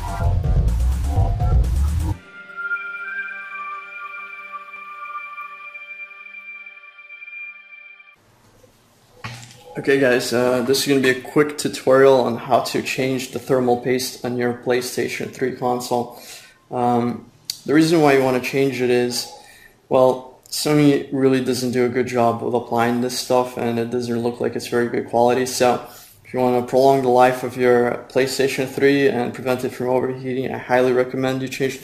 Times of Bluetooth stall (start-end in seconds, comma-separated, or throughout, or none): none